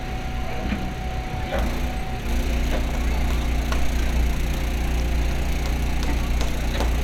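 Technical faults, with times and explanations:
No technical faults can be heard anywhere in the sound.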